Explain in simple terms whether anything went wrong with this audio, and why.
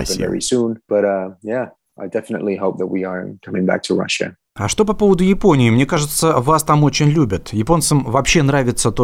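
Nothing went wrong with this audio, as the speech stays steady and unbroken with nothing out of place at any moment.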